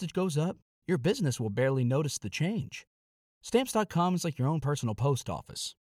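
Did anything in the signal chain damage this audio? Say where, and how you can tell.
No, nothing in this speech stood out on listening as damage from any stage of the signal chain.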